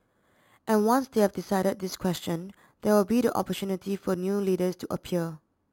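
Imaging from sample-and-hold upsampling runs through the whole of this speech clip. The rate was raised by holding each sample flat for several output samples with no smoothing filter, which points to an original rate near 11 kHz stretched to 44.1 kHz. The stair-stepped waveform leaves mirrored copies of the speech spectrum, the lowest spanning roughly 5.5 to 11 kHz at about 21 dB below the speech. This adds a bright, metallic fizz that rises and falls with the talking.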